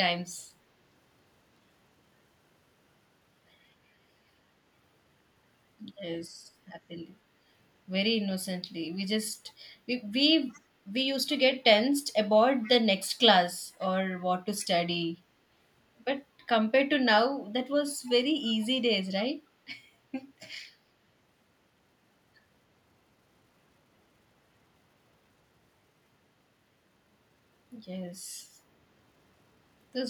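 Echo leak in this speech clip at 10.49–10.61, 12.62–12.69, 14.59–14.66 and 18.06–18.10 s: short, faint scraps of the voice return 312 ms late, far quieter than the speech, likely because a loudspeaker-side echo canceller let residual microphone pickup slip back into the call.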